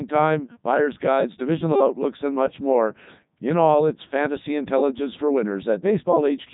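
From start to finish the speech carries Codec 2 vocoder damage, and it is heavy. Instead of preserving the waveform, the decoder rebuilds each frame from pitch, voicing, energy and a spectral envelope, so the voice comes out robotic and buzzy. The texture fits the codec's top 3.2 kbit/s mode. A spectrogram shows rigid, evenly spaced harmonic stripes and nothing above 3.8 kHz. The waveform looks regular and synthetic rather than natural.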